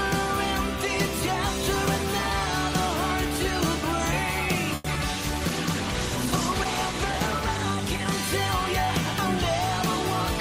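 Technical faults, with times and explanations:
4.75–4.86 s, short stall from a late packet: the sound briefly hangs, one moment held about 90 ms too long with a faint buzz or dip. A packet arrived late, the jitter buffer emptied, and the receiver stretched the last audio until it came, losing nothing but adding 90 ms delay.
4.94–4.97 s, short concealed packet loss: a quick smear or wobble follows. About 20 ms of audio never reached the decoder in time; the receiver covered a 10 ms stretch by extending the preceding sound, then blended back into the real signal.
5.22–8.93 s, call bitrate drop: the sound turns rougher and less detailed for several seconds. The bandwidth estimate fell and the encoder was cut from 32 to 13 kbps, holding the lowest rate for 1.89 s, so it coded more coarsely before recovering.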